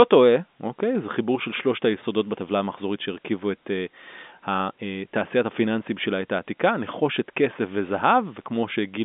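No technical faults occur at any point in the clip, so there is nothing to describe in time order.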